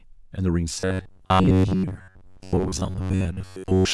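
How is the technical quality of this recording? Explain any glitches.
From 0.8 s to the end, the speech turns into a rigid, metallic buzz near 93.8 Hz that still loosely tracks the words. This is robotic sound from repeated short buffers: the likely cause is audio arriving too seldom, so a slice of roughly 10.7 ms is replayed for about 70 percent of the time while real audio is skipped.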